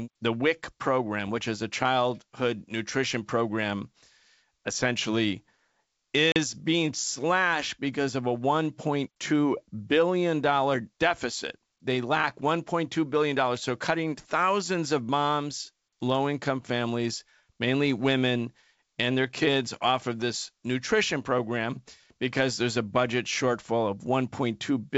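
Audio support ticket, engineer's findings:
Packet loss on the ADPCM call at 6.32–6.37 s: a hard-edged hole of about 40 ms, which fits a couple of dropped packets, right before "being slashed because of". The decoder's adaptive predictor and step size fall out of step with the sender's during the gap, so the speech comes back on a mismatched state and needs tens of milliseconds to lock back on. The G.722 wideband path around it sounds clean.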